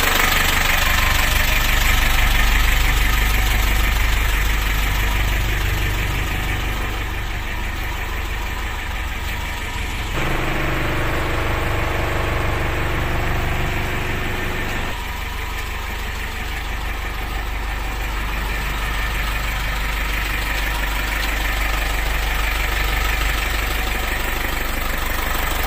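No technical faults can be heard anywhere in the clip.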